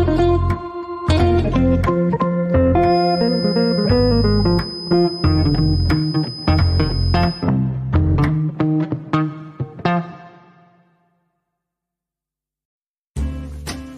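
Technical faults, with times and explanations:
2.80 to 7.51 s, feedback whistle: a thin, steady tone at 5 kHz sits behind the sound for close to five seconds, roughly 15 dB below the programme level, swelling and fading slowly in loudness. The likely cause is a loudspeaker-to-microphone loop running with gain just at the edge of instability, so that one frequency keeps recirculating and sustains itself without building into a full howl, then stops at 7.51 s.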